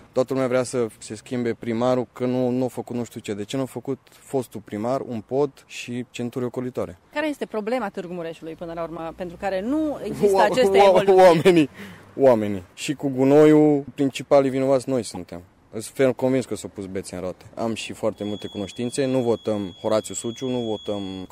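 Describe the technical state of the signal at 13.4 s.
Hard clipping runs from 13.31 to 13.62 s, so 13.4 s falls inside it. For that stretch the signal is driven about 4 dB past what the chain can pass, and the peaks are sheared off flat instead of following their true shape. Those squared-off tops add harmonics high up the spectrum, heard as a harsh, gritty crackle riding on the loudest parts of the sound for roughly a third of a second.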